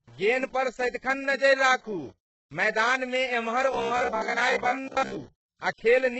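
Speech runs through the whole clip with a gritty, grainy distortion that rises and falls with the voice rather than sitting underneath it as steady hiss. That is what separates it from ordinary background noise. The error sits roughly 35 dB below the signal, and quiet tails break up instead of fading smoothly. This is likely low bit depth without dither, with plain rounding that fits 8-bit audio. Dither would have turned it into a constant, signal-independent noise floor.

Layered on top is heavy HE-AAC compression, likely at a very low bitrate around 8 kbps. The treble stops entirely at 8 kHz. Below that edge, the upper band sounds rebuilt rather than recorded: s sounds come out metallic and lispy, and the harmonics do not line up with the lower spectrum. That mismatch is the sign of spectral band replication, and a simple low-pass filter would dull the top end without it.

From 3.73 to 5.19 s the voice turns into a rigid, metallic buzz at 66.8 Hz that only roughly follows the original intonation. 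This is robotic sound from repeated short buffers. A repeat period of about 15 ms points to a buffer of that length, and about 70 percent of the audio in that span is repeats while the real material is skipped. Unlike pitch-shifting or vocoder effects, the buzz stays locked at one fixed rate whatever the speaker does.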